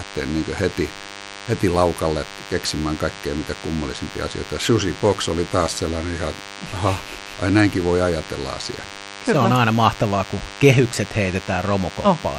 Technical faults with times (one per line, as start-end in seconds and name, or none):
0.00-12.39 DECT cordless phone buzz